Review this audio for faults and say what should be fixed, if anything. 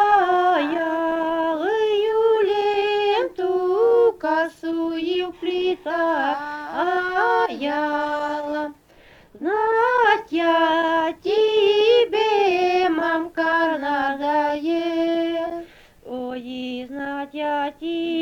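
No faults turned up in this audio, so nothing needs to be fixed.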